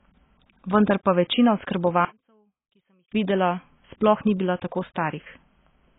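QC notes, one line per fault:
Throughout: AAC compression. Nothing is present above 3.8 kHz, and the speech sounds dull and smeared, with a fizzy, warbling texture on sibilants and held sounds. This is likely heavy AAC-LC coding, consistent with a very low bitrate around 16 kbps.
2.05 to 3.12 s: one channel inverted. The speech nearly vanishes for about a second, dropping by about 30 dB. One stereo channel has likely flipped polarity, so the centred voice cancels when both channels are summed to mono, leaving only a faint difference signal.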